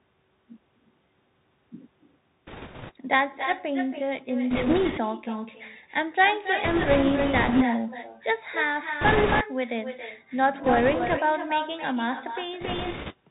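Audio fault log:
Throughout: echo with no canceller. Every phrase is followed roughly 300 ms later by a second copy sitting about 8 dB below the direct sound, thinner than the original. That delayed shadow is the round trip of the far end's loudspeaker being picked up by its own microphone and sent back, with nothing in the path subtracting it.
Throughout: Bluetooth CVSD headset codec. The sound is confined below 4 kHz, so it lacks air and presence. A fine granular hiss runs under it, and sibilants come out scratchy. Fast, loud high-frequency movements distort because the codec tracks the waveform one up-or-down step at a time and its adaptive step size cannot keep pace. The damage is plainly audible and fits a 64 kbps CVSD headset link.
2.47–2.92 s, 4.50–5.00 s, 6.64–7.64 s, 9.01–9.44 s, 10.64–11.18 s, 12.60–13.13 s: bit errors on a Bluetooth voice link. In each of these spans a rushing, crackly noise rises over the sound, and the 6.64–7.64 s run lasts longest. 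The noise is loudest around 9.0–9.4 s and gentlest at 10.6–11.2 s. Flipped bits in a CVSD stream each nudge the waveform by one step, larger when the speech is loud, and the error fades away, so the damage builds into a wash of noise rather than sharp clicks.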